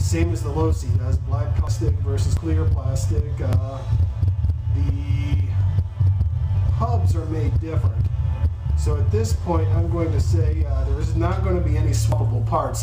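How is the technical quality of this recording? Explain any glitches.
There are four skips in the sound. The audio jumps straight ahead at 1.67 s, 2.37 s, 3.53 s and 12.12 s, and no silence covers any of the gaps. At 1.67 and 12.12 s, roughly 150 ms goes missing. At 2.37 and 3.53 s, the loss is nearer 50 ms. The likely cause is a dropped buffer (overrun), where the software didn't fetch its samples in time, the hardware overwrote them, and the surviving audio was spliced together.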